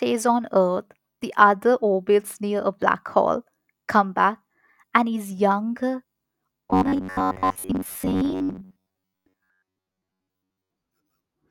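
From 6.66 s to 10.70 s the speech takes on robotic sound from repeated short buffers: a rigid, metallic buzz at about 94 Hz that still loosely tracks the phrasing. A fixed 94 Hz pitch corresponds to a segment of roughly 10.7 ms being replayed over and over. The likely cause is audio arriving too seldom, so the software fills the gaps by looping the last segment while the real audio is skipped. That looping covers most of the span, roughly seventy percent.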